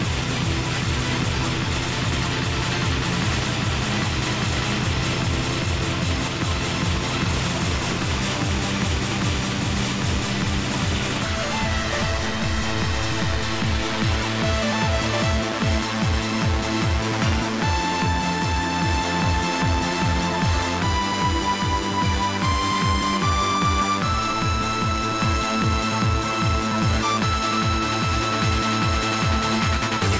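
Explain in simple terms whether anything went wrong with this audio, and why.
Nothing went wrong here: no dropouts, glitches, distortion or other faults can be heard anywhere in the audio.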